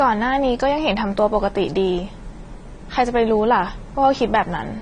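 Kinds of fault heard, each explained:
Transcoding between lossy codecs: throughout the speech, two layers of coding artefact are heard together, likely from a low-bitrate Vorbis encode re-encoded as AAC-LC. A spectrogram shows a hard flat ceiling at 10.1 kHz and patchy, blocky gaps below it.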